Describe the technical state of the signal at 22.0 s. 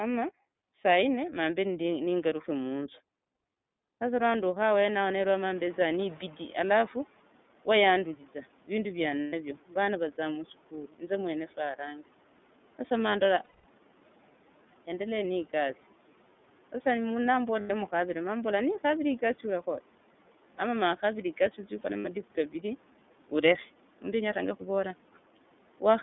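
At 22.00 to 22.06 s, lost iLBC frames: about 60 ms, which fits two missing 30 ms frames, is filled by a repeated pitch cycle mixed with noise. It sounds like a held, buzzy vowel and shows as a smeared, repeating harmonic patch on the spectrogram.

The iLBC codec runs throughout. Its narrowband coding holds energy between 200 Hz and 3.6 kHz, leaving an empty spectrogram above that line, and gives a plainly rough, synthetic texture.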